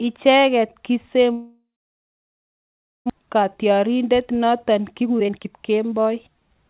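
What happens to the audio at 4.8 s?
At 4.8 s the speech is inside a jitter buffer speed-up that runs from 3.19 s to 6.65 s. The receiver's buffer had built up excess audio, so it trimmed out short pitch-period-sized pieces again and again, playing the speech at 120% pace with unchanged pitch and dropping roughly 0.7 s overall. It sounds hurried. On a waveform the syllables sit closer together. A spectrogram shows compressed timing, with harmonics still steady and everything band-limited below 4 kHz by the G.711 call path.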